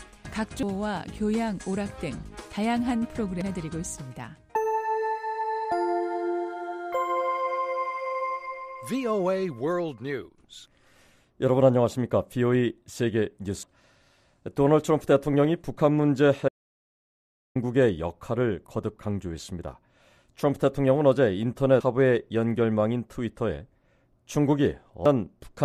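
Damaged data in the compressed stream makes the decoder misread frames, lose sync and hunt for the next header. This is heard as brief chirps or blips at 0.63, 3.42, 13.63, 21.81 and 25.06 s. An audio dropout to silence, likely from the input being lost while the recorder kept writing silence, cuts the audio to total silence from 16.49 to 17.56 s. For about 1.07 s there is no room tone, and whatever sounded then is gone.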